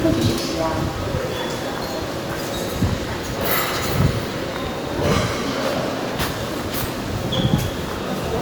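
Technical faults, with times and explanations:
No technical faults are present in this recording of sounds. Nothing in it calls for a time or an explanation.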